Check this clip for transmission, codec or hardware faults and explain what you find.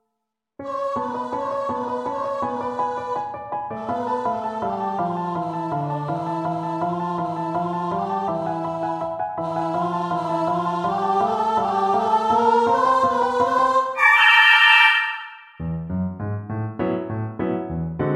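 Nothing stands out here, and the audio comes through without any audible problem from the line, the encoding or the equipment.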